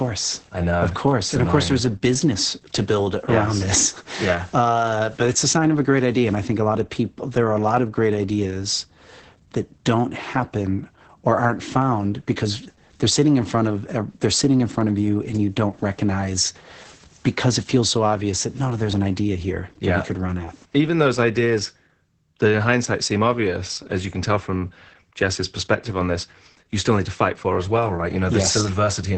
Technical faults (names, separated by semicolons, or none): Opus voice compression